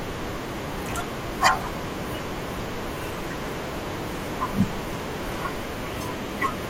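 At 3.75 s, an overlap between stream segments drops a few milliseconds from the 4.0 s segments, so the speech waveform jumps, heard as a tiny skip.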